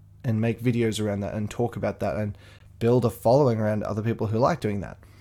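At 0.56 s, just before "videos around that and", then at 2.59 s between "talk about that and" and "build a following around", and at 4.60 s after "a following around other", a gap between stream segments cuts in: hard-edged silences of 6.6, 16.8 and 6.8 ms, spaced about 2 s apart. Mismatched segment timestamps leave holes that the player fills with silence. Unlike a dropout, no speech is lost; it resumes exactly where it stopped.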